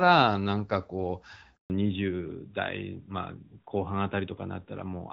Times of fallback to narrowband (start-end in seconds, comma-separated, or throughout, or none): 1.70-5.13